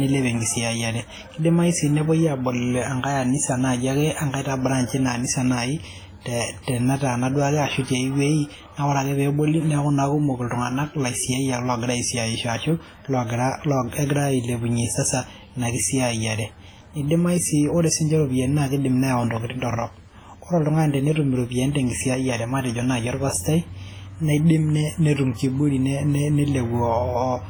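From start to finish the speech carries heavy transform-coding damage, likely WMA compression, which fits a bitrate around 24 kbps. Noise spreads over long blocks and weak detail is zeroed, so it sounds ringing and washy, with hiss that breathes with the speech.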